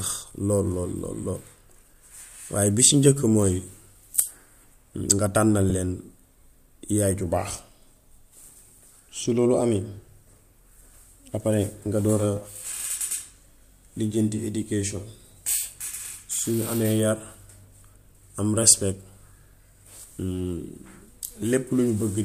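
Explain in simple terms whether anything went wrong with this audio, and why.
One short glitch can be heard in this speech recording, from 5.70 to 5.72 s. It is caused by lost LE Audio frames. The sound traveled over Bluetooth in small packets, and one brief piece, about 10 ms long, went missing. The receiver filled the hole with a guess based on the sound just before it. That guess is rough, so the sound turns into a quick noisy smear. The compression itself is likely only adding a slight graininess.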